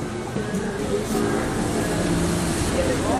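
At 0.78 s and again from 2.68 to 2.70 s, the audio briefly breaks up, the sign of damaged data in a compressed stream: corrupted bytes make the decoder misread those frames and lose sync until it finds the next valid frame header.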